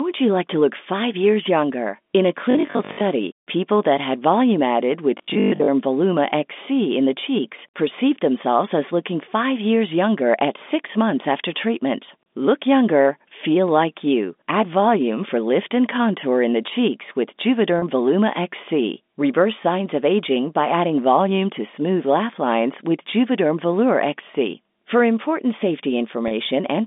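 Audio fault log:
2.51–3.01 s and 5.18–5.70 s: robotic sound from repeated short buffers. Both stretches take on a rigid, metallic 50 Hz buzz, just before "people that had volume" and just after "that had volume added". The likely cause is starved playback looping about 20 ms of audio, repeating roughly half while the rest is skipped.
17.79–17.82 s and 26.28–26.31 s: packet loss with pitch repetition. About 30 ms of audio is missing each time, the first just after "cheeks with". This fits a single lost packet. The receiver repeats the last pitch period to cover the gap, so each one sounds like a brief, slightly held buzzy note.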